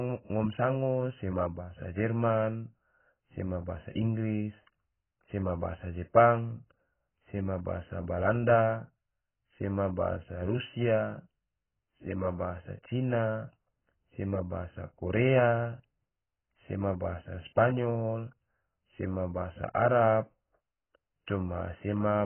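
From start to finish the speech is dull and smeared, with nothing above about 3.1 kHz and a warbly, fizzy edge on sibilants. That's heavy damage of the kind AAC compression leaves, likely AAC-LC squeezed to a very low bitrate, around 12 kbps.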